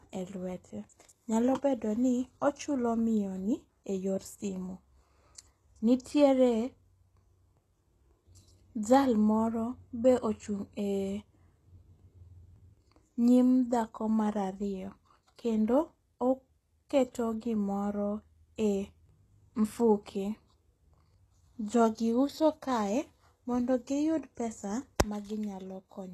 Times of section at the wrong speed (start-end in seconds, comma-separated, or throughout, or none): none